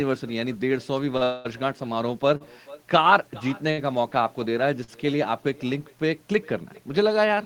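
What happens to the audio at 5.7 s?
At 5.7 s the speech is shadowed by an echo with no canceller, as it is through the whole clip. The far end evidently plays the call over a loudspeaker, its microphone picks it up, and nothing strips it out, so the voice returns after the network round trip, around 0.4 s later and about 23 dB down, and thinner. Unlike room reverberation, it is a distinct delayed repeat rather than a smooth decaying tail.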